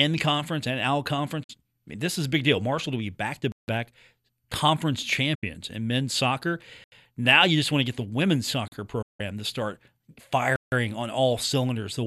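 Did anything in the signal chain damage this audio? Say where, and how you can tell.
Yes. Three times the speech briefly fades out over about 8 ms and falls silent: 1.43 to 1.50 s, 5.35 to 5.43 s, and 9.02 to 9.20 s, just before "to start". This is a digital broadcast dropout at the reception stage. The receiver mutes on bad frames, and the 48, 72 and 168 ms holes fit whole lost frames of 24 ms.

Four other gaps cut abruptly to dead silence. They fall at 3.52 to 3.68 s, 6.84 to 6.92 s right after "in men's soccer", 8.68 to 8.72 s, and 10.56 to 10.72 s just before "on all". These are blocks of digital silence from the driver or buffer stage, where unfilled output became zeros for 160, 80, 40 and 160 ms.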